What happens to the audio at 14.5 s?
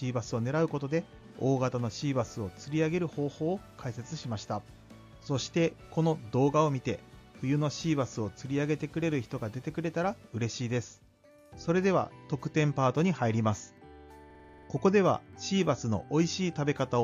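At 14.5 s the audio is caught in a system hang loop. From 14.30 to 14.68 s, one 46.44 ms slice plays eight times in a row. The machine stalled while the sound hardware kept reading the same ring buffer over and over. The loop length fits a 2048-sample buffer. At 21.5 repeats per second, the result is a rough, rapid stutter on the edge of a buzz. Little or no audio goes missing around it.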